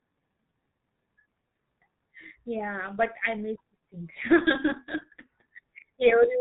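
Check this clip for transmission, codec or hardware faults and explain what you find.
The whole clip has gone through a G.723.1 codec, and it's taken a heavy hit. From start to finish the speech is muffled and hoarse, with consonants smeared together. Nothing comes through above 4 kHz. The codec chops the signal into 30 ms frames and rebuilds the voice from a coarse model that only updates frame by frame, so fine detail gets lost. The damage fits a low bitrate of around 6 kbit/s.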